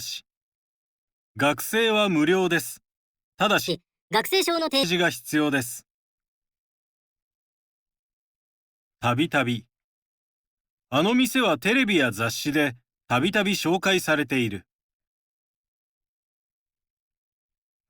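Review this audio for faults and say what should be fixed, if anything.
From 3.68 to 4.83 s the speech plays at 1.43 times speed, rising about seven semitones: a section at the wrong speed, likely from a clock or sample-rate mismatch. Prevent it by confirming every segment's sample rate matches the project before editing or playback.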